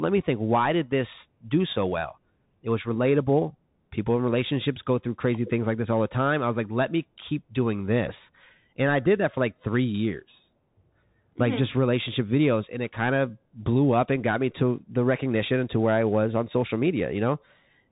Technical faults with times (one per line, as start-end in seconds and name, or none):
0.00-17.91 Bluetooth CVSD headset codec